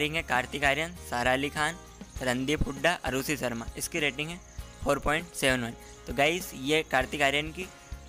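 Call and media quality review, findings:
Loud pop at 3.20 to 3.47 s: two sharp hits back to back, peaking about 10 dB over the audio, which carries on underneath. Likely a voltage spike from a plug, switch or static, shaped by downstream circuitry into a brief pulse.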